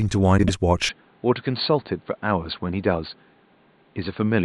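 From 0.38 to 0.50 s, frames out of order: two neighbouring blocks of about 48 ms were decoded in swapped order, so that stretch plays its halves exchanged. It comes out as a garbled flutter, and unlike a dropout, no time goes missing.

From 0.89 s to the end, the sound turns dull and boxy with nothing above 4.6 kHz, drops about 5 dB, and gains a new noise floor roughly 35 dB down, with no silence at the change. That is likely an input switched to a poorer device. A plain low-pass filter would not bring its own noise and level shift.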